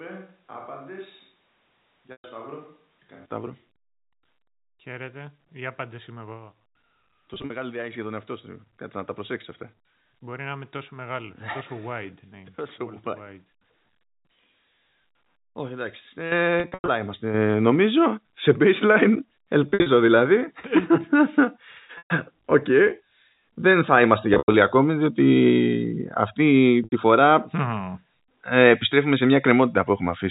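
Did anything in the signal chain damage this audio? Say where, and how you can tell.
Yes. At the network stage, packet loss with pitch repetition appears at 2.12, 7.34, 16.6, 19.7, 21.98, 24.34 and 26.84 s. Gaps of 80 to 200 ms are bridged by a repeated pitch period that buzzes, then fades.

In call processing, the microphone volume is stepped up twice: about 8 dB at 16.32 s and about 5 dB at 17.34 s. Voice and background jump together, abruptly.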